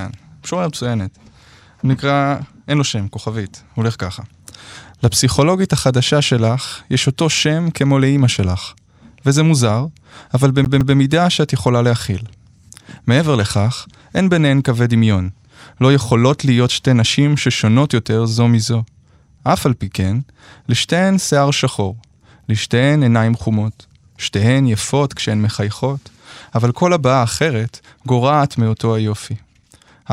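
A CD stuck on one turn interrupts the speech from 10.65 to 10.97 s: the same 160 ms slice plays twice, with a brief mute at each jump back. The scratch returns the laser to one spot per revolution, so each repeat is identical and evenly timed, unlike a random buffer dropout.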